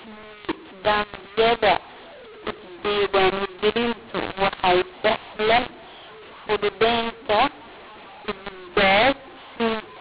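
From start to finish, the speech has a mu-law and A-law mix-up. The telephone audio was coded with A-law but decoded as mu-law. The two logarithmic scales disagree, so samples land at the wrong levels. Some come out too loud, others too soft. The quietest samples rise well above silence. The speech sounds harsh and gritty, and the pauses fill with hiss. Beneath this, nothing reaches past about 4 kHz, which fits 8 kHz telephone sampling.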